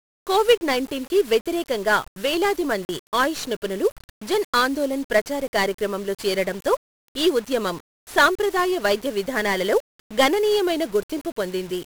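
The clip is speech, heard through a thick layer of 1-bit DFPWM compression from start to finish. Each sample is coded as a single bit that nudges a tracking level up or down. That coarse steering leaves heavy broadband noise. The speech sounds fuzzy and crackly. The high end is smothered in hiss. The density of the grain fits a stream of about 48 kbps. At 2.85 to 2.89 s there is a block of digital silence. For 40 ms the sound cuts out. The cut in and out is abrupt, with no fade, so the gap is heard as a brief hole.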